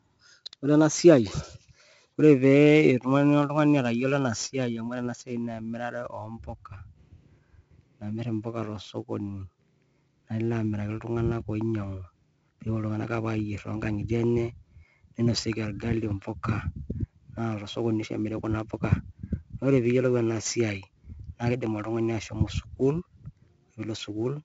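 A speech clip carried through 4-bit ADPCM compression from start to finish, at a rate that fits 64 kbps and a 16 kHz sample rate: each sample is coded as a coarse step from a prediction, leaving a gritty, level-following hiss on every loud syllable, smeared attacks, and nothing above about 7.7 kHz.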